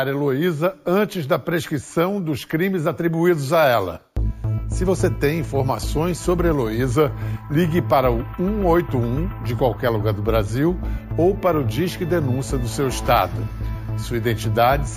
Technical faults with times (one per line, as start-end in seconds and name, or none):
0.00-14.97 imaging from sample-and-hold upsampling